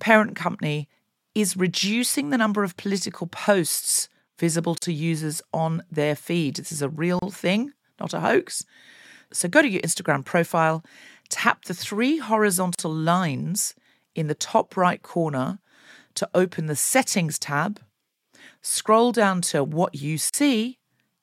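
Gaps at joins of encoded pieces cut the speech at 4.78 s (41 ms, after "of political posts visible"), 7.19 s (32 ms), 12.75 s (40 ms) and 20.30 s (42 ms). Each is a short silence with smeared edges left by untrimmed encoder delay and padding where separately encoded pieces were joined, and the speech resumes exactly where it stopped.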